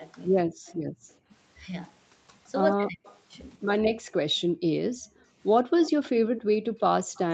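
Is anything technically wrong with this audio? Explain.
Yes. This speech clip has three kinds of echo-canceller fault, recurring through it.

Speech suppressed in double talk occurs from 0.44 to 0.65 s and from 2.72 to 3.62 s. The talker's level dips sharply while the far side is also speaking, by roughly 40 dB in the first stretch and about 35 dB in the second. The audio is affected for around 0.2 s and 0.4 s respectively. The likely cause is that the canceller could not tell the near talker from the loudspeaker echo, so it turned everything down together.

Echo leak appears at 0.66 to 1.14 s, 3.03 to 3.20 s and 5.16 to 7.19 s. A faint delayed copy of the voice trails the original by 128 ms in the first two and 143 ms in the last. It is about 30 dB, 25 dB and 20 dB below the speech, so the final, longest stretch is the most audible. This is likely residual loudspeaker pickup that the canceller failed to subtract and sent back.

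Background gated by the echo canceller occurs from 0.93 to 1.29 s, a drop of about 38 dB lasting around 0.3 s, and again from 3.90 s to the end, reaching about 40 dB. The room sound falls away abruptly while the loudspeaker plays, because the canceller clamps the microphone hard and releases it only afterwards. The result is audible holes in the background.

The audio carries nothing above 8 kHz, consistent with wideband Opus at about 24 kbps.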